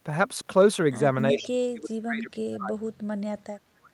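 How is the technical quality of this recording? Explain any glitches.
The technical quality is compromised from about a third of the way into the clip by two faults, both tied to two-way call processing.

Speech suppressed in double talk, from 1.32 s to the end: the echo canceller most likely could not tell the near talker from loudspeaker echo while both sides were talking, so it turned everything down together. The speech sinks sharply, by about 35 dB at its deepest, dipping, losing its high end or cutting out in pieces.

Echo leak, from 1.39 to 1.47 s: part of the far-end loudspeaker signal picked up by the microphone was likely not cancelled and got sent back. The result is a brief, faint delayed copy of the speech, arriving 374 ms behind the original and sitting about 25 dB below it, heard as a short ghostly scrap just as the suppression begins.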